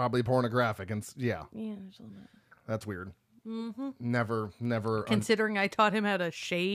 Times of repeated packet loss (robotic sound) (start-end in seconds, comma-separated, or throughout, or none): none